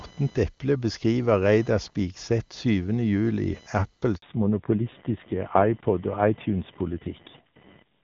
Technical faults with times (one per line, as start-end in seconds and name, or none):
0.00-8.04 computer activity noise
4.16-4.22 handover gap
4.22-8.04 fallback to narrowband